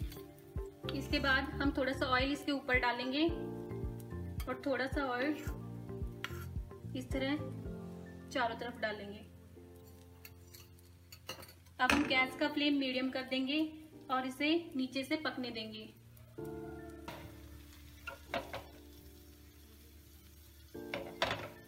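From 17.51 to 19.01 s the sound turns gritty and grainy, distortion tracking its level, likely low bit depth without dither: about 10-bit truncation, error near 40 dB down.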